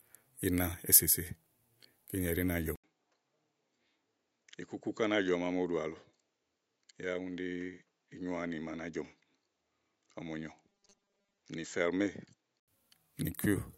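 At 2.76 s the speech drops out for about 80 ms, then comes back duller and a few decibels quieter, with a faint new noise floor sitting well below the speech. That's likely an input switched to a poorer device, a narrower-band mic or headset profile with its own tone and noise. The dull, boxy sound holds until 12.68 s, when the fuller sound returns.

Inside that stretch, from 10.69 to 11.38 s, the speech turns into a stiff metallic buzz pitched at 200 Hz that still roughly tracks the syllables. This is robotic sound from repeated short buffers: audio arrives too seldom, so the last short chunk gets replayed while most of the real signal is skipped. The 200 Hz pitch fits a 5 ms chunk looping, likely from a late or starved capture buffer.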